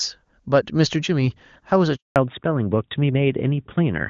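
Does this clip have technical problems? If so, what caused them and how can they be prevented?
Yes, there are two, and they're linked. First there's a handover gap from about 1.96 to 2.16 s. The speech just drops out for 200 ms, fading within a few tens of milliseconds and then going silent. That's the call being passed from one network to another, with no speech frames getting through while the switch happens, so whatever was said in that stretch is simply gone. To prevent it, you'd need make-before-break handover or better coverage at that spot, so the call doesn't have to switch networks.

Right after the gap, from 2.16 s to the end, there's a fallback to narrowband. Before the gap the audio is full HD Voice, clean and bright, consistent with AMR wideband (HD Voice) at a high rate like 23.85 kbit/s. Once the new link comes up, nothing above 4 kHz survives, so the voice turns duller and rougher. 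That points to the call being renegotiated onto AMR narrowband, likely around 12.2 kbit/s, because the new network leg couldn't carry wideband. To prevent it, make sure every network the call might hand over to supports AMR-WB end to end, so the codec doesn't have to step down.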